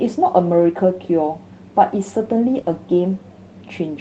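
Around 2.57 to 2.59 s there's a lost packet rebuilt from error correction. The packet never arrived, but the next one carried a low-bitrate backup copy. The decoder played that copy instead, so there's no gap, just a brief patch that sounds rougher and a bit noisier.

Right after, from 2.61 to 2.65 s, comes a short concealed packet loss. About 20 ms of audio went missing with no backup available, so the receiver extended the last bit of sound for roughly 20 ms and then blended back in. You hear it as a quick smear or wobble.

From 2.65 to 2.75 s three more packets were lost, again rebuilt from error correction, for about 60 ms of those grainier, noisier backup frames. Since the call path tops out around 8 kHz, the rebuilt stretch doesn't lose any extra top end.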